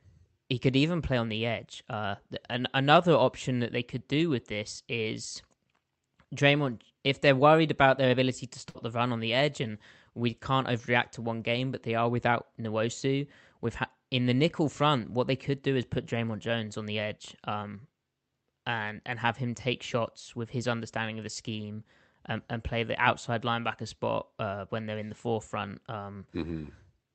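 Speech over a WebRTC call path, band-limited to about 8 kHz. At 8.69–8.77 s, right after "about their ability to", a burst of packet loss leaves a 55 ms concealed, fading tail, then roughly 60 ms missing before "the run on the".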